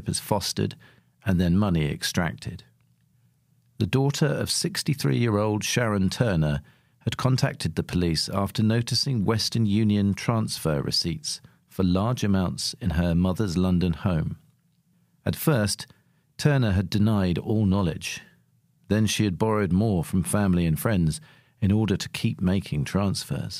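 No technical faults can be heard anywhere in it.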